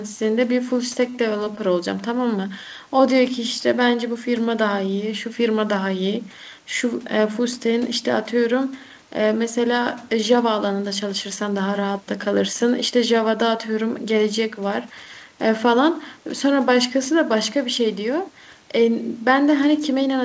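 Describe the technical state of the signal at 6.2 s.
At 6.2 s the speech comes through intact with no fault, carried over a G.722 call path that leaves nothing above 8 kHz.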